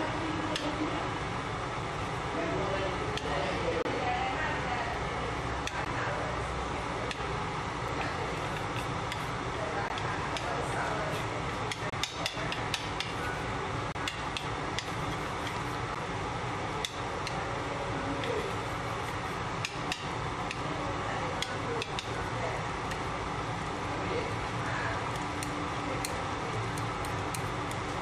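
Short silent holes cut the sound at 3.82–3.85, 5.85, 7.88, 9.88, 11.90–11.93, 13.92–13.95 and 15.95 s. This is a gap between stream segments. The spacing fits 2-second segments. Mismatched time stamps leave holes of 5 to 28 ms, filled with silence. Their edges are hard.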